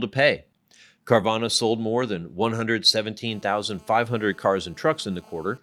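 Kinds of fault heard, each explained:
GSM phone buzz: a 2G handset close to the recording chain transmits in short radio bursts at about 217 per second, and the audio circuitry rectifies that pulsing into a hard, raspy buzz at 217 Hz stacked with harmonics, unrelated to the speech. Here it enters at 3.27 s and runs to 5.58 s at roughly 31 dB below the speech, holding nearly steady throughout, which fits a phone in an active call.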